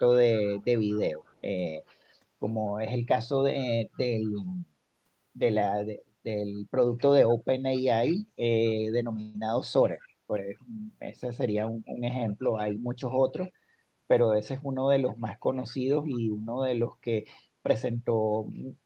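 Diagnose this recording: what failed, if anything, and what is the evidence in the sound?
Echo leak, in call processing. A faint delayed copy of the voice trails the talker by 230 ms at 0.38 to 1.41 s, 3.95 to 4.52 s, 8.67 to 8.74 s, 10.02 to 10.08 s, 15.69 to 15.74 s, 16.12 to 16.20 s and 17.32 to 17.38 s. It sits roughly 25 to 35 dB under the direct speech. The likely cause is a far-end loudspeaker whose echo canceller let part of the returned signal through.

Call audio freeze, at the network and jitter-buffer stage. From 9.21 to 9.36 s the sound stalls, and the last fragment is stretched into a fading buzz or hiss for about 130 ms rather than dropping to silence. Afterwards the speech resumes exactly where it stopped, so nothing is lost. Everything after it runs 130 ms later. Delayed packets likely emptied the receive buffer, and the decoder filled the wait.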